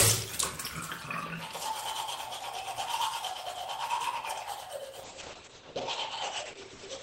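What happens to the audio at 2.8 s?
At 2.8 s the audio is intact, with no dropout, click, distortion or other fault at that moment.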